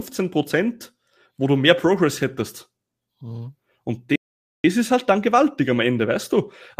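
At 4.16 s the speech cuts off abruptly and the output falls completely silent for about 0.48 s, then picks up again at 4.64 s with "ist halt dann gewaltig", carrying on from where it broke off. That gap is a playback stall. The player was likely starved of data or had its audio thread blocked, so it had nothing to send to the output until it recovered.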